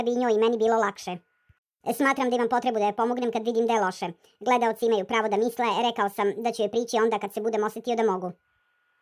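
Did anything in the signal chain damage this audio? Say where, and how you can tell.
Yes: from start to finish, everything runs about 1.45 times fast and about 6.45 semitones high together. This is a wrong sample rate at playback, fitting 22 kHz material played at 32 kHz.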